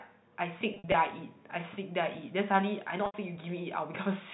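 Speech over G.711 telephone coding, cut off at 4 kHz, with packet loss with pitch repetition in two places. From 0.74 to 0.94 s about 120 ms goes missing in gaps of up to 60 ms. The receiver fills each gap by repeating the last pitch period, giving a held, buzzy sound. At 3.06 s an 80 ms gap is bridged by repeating the last pitch period, which fades into silence before the speech returns with a short cross-fade.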